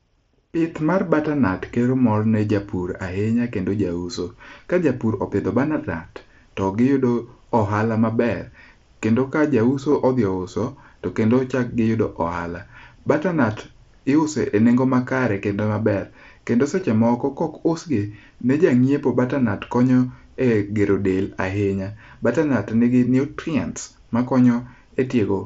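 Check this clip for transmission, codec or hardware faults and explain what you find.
Two brief dropouts in this speech clip are concealed Bluetooth headset packet loss, at 9.91 s and 16.80 s. Each gap is about 15 ms, which points to two lost packets. The receiver filled them by repeating a closely matching recent stretch of waveform. The patches are heard as a brief buzzy blip. The wideband mSBC headset link carries the sound, with its light grainy texture.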